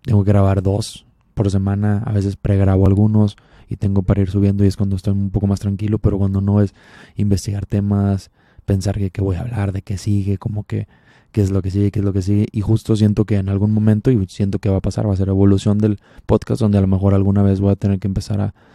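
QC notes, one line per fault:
2.86 s, overlap between stream segments: 15 ms of speech vanishes at a segment join, so the waveform jumps, leaving no silent gap as a dropout would.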